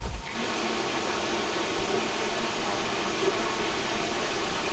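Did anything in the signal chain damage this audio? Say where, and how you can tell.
Yes, an echo leak in call processing: a strong copy trails the speech by 133 ms throughout, likely loudspeaker pickup that the far end's echo canceller missed.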